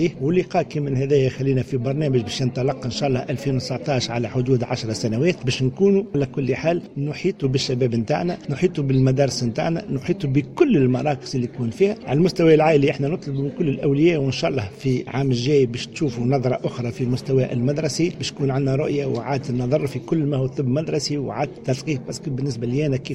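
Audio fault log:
6.84–7.44 s, sudden gain jump: the level steps down by about 4 dB in a single instant, holds there for 0.6 s, then steps back up just as abruptly. The sound and the background noise fall and rise together, which points to a change in the digital gain itself, not to anything in the source. The likely cause is a level setting applied between one sample and the next with no ramp to smooth the transition.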